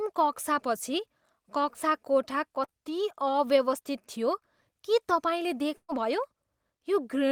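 At 1.73 s and 2.64 to 2.71 s, short concealed packet loss drops about 20 ms and 40 ms of speech, patched by extending the preceding sound. Each appears as a brief smeared patch in the spectrogram. At 5.77 to 5.90 s, a burst of packet loss removes 120 ms. The concealment continues the last sound and fades it down, and leaves a visibly flat, near-silent waveform gap.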